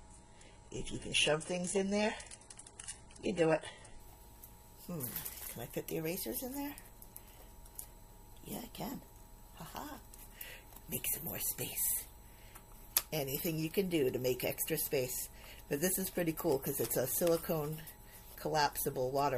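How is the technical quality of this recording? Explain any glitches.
The quality is compromised at the very start, then recovers. From 0.0 to 4.0 s this is an adaptive stream starting at a low bitrate: the player opened on a very lean version of the stream, which sounds like a roughly 12 kbit/s HE-AAC encoding, so playback could begin immediately, then switched up once it had gauged the connection. During those first seconds the genuine treble is missing, the top end that remains has a synthetic, smeared quality, and compression artefacts are prominent. At 4.0 s the sound jumps to a clearly fuller, cleaner rendition, consistent with a 96 kbit/s AAC-LC stream, without any gap or dropout at the changeover.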